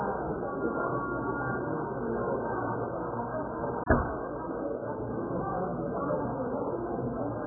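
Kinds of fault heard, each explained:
AAC compression: The sound is dull and smeared throughout, with nothing above 1.7 kHz and a warbling, swirly texture on sustained sounds, likely from AAC-LC at a very low bitrate near 8 kbps. That watery texture and patchy spectrum distinguish it from a plain low-pass filter.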